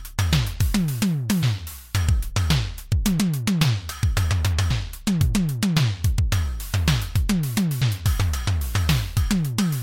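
At 1.42 s and again at 7.80 s there is a brief blip lasting under 20 ms each time, caused by damaged data in the compressed stream: corrupted bytes make the decoder misread the frame, lose sync and resume at the next valid frame header.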